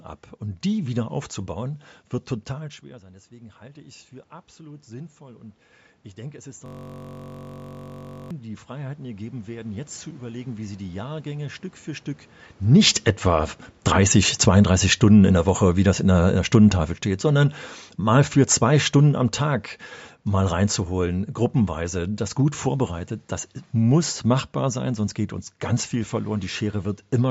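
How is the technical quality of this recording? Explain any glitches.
The recording has three clear glitches, all in the middle stretch of the speech.

Right after "die wieder aufzubauen wird", around 2.54 s, the talker drops back by about 21 dB, and automatic gain rising kicks in. The AGC slowly winds up about 18 dB until 11.52 s, so voice and room noise swell together.

From 6.66 to 8.31 s there's a system hang loop. The machine stalled while the hardware kept replaying one 21.33 ms chunk, which fits a 1024-sample buffer. That gives a steady 46.9 Hz buzz.

Around 12.5 s the talker moves again. Automatic gain falling then pulls the level down by about 11 dB between 12.6 and 19.36 s, so the voice starts loud and sinks along with its background.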